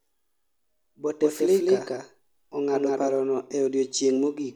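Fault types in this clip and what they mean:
Doubled audio track: from about 1.22 s to 3.18 s the speech is mixed in twice, with a second full-band copy trailing roughly 200 ms behind at about the same loudness as the original. The copy is dry, with no decay or room colour, and it cuts in and out abruptly at both ends. It's likely a second capture through a slower path, or an edit holding two out-of-step copies.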